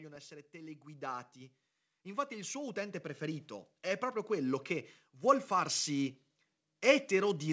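From 0.29 to 1.37 s the automatic gain rises by about 4 dB, then again from 2.03 to 4.61 s by about 9 dB up to "che vuol farsi": the control judged the input too quiet and lifted gain gradually, so the speech and background swell together. The call path's band-limit at 8 kHz stays unchanged throughout.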